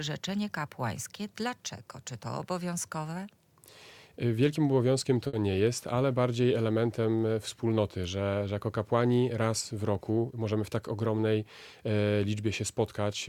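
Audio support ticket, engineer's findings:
Short stall from a late packet, 5.27 to 5.41 s. Jitter buffer ran empty waiting on a late packet; receiver stretched the last sound about 60 ms, then resumed in place. Nothing lost, but the sound hangs briefly with a faint buzz or dip, and playout delay rises by 60 ms.

Jitter buffer speed-up, 10.10 to 10.53 s. Buffer held more audio than its target; receiver trimmed pitch-period slices repeatedly, cutting roughly 70 ms. Playback runs at about 114% speed with unchanged pitch, so the passage sounds rushed.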